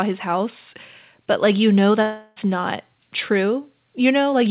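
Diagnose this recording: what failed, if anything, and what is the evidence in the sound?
Right after "but like you know", from 2.02 s to 2.38 s, the speech turns into a smeared, buzzy continuation of the last sound that fades but never drops to full silence. When the talker returns, about 0.34 s of speech is missing. This is a long network dropout at the network stage, likely from lost packets. The receiver's concealment stretched the last received audio across the gap, and playback resumed beyond the lost stretch. The band stops at 4 kHz, which fits a G.711 call path.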